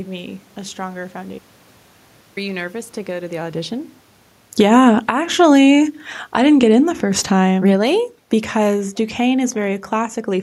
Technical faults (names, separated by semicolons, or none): automatic gain falling